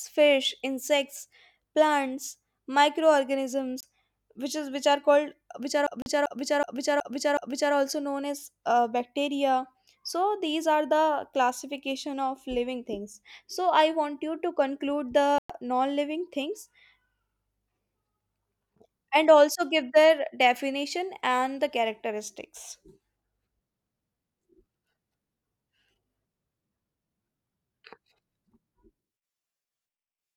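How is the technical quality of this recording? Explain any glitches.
The recording has clear technical faults: three brief dropouts to silence and one stretch where a short piece of speech repeats several times.

Bluetooth stall, 3.81 to 3.83 s, 6.02 to 6.06 s and 15.38 to 15.50 s. The speech cuts to silence for about 24 ms, 40 ms and 111 ms, then resumes. The likely cause is wireless interference holding back packets so the headphone buffer ran empty and playback paused until the resent data arrived.

System hang loop, 5.87 to 7.74 s. The machine or its audio driver froze while the sound hardware kept replaying the same ring buffer. A single 372 ms segment repeats five times, which fits a 16384-sample buffer. It repeats at 2.69 times per second. The 6.02 s stall falls inside this loop. Afterwards the speech continues with essentially nothing missing.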